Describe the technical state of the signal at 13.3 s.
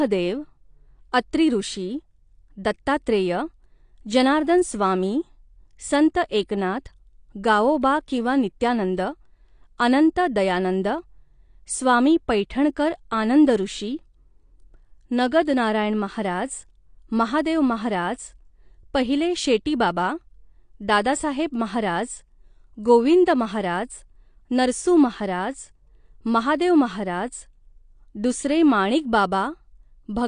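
At 13.3 s the speech carries the dull, warbling smear of likely AAC compression, present throughout. Nothing sounds above 9.8 kHz, and a bitrate near 32 kbps fits that. Unlike a plain low-pass filter, quantised bands leave fizzy, swirling sibilants.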